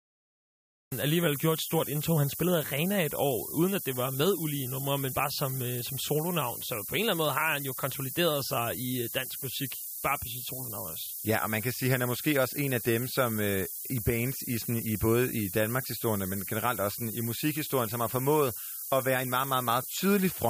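A steady, thin hiss, rising sharply toward the top of the band and nearly as loud as the speech itself, runs through this speech recording. It comes from low bit depth with noise shaping: only 5 bits, with the rounding error pushed up in frequency. The clip also opens with digital silence until 0.92 s, when the speech cuts in mid-sound with no natural attack. This cut-off start comes from the recording beginning late.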